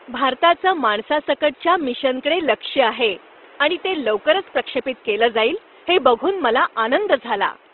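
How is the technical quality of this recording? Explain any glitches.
Technical quality is limited by plainly audible codec damage throughout the speech. The room noise sits about 29 dB below the speech and is part of the recording rather than a fault.

Opus compression, likely, throughout: the speech sounds rough and grainy, with tonal parts turned noisy. Short of bits, the music-mode encoder fills bands with folded or noise content while keeping full bandwidth, which fits a low bitrate around 16 kbps.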